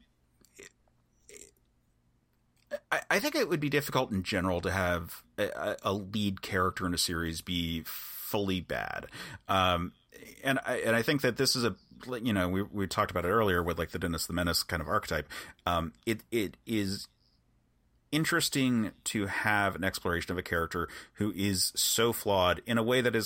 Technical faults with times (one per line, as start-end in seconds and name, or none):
none